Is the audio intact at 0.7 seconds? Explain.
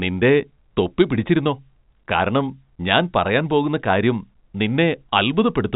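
Yes, the speech at 0.7 seconds is intact, with nothing there beyond the narrow telephone band of its G.711 coding.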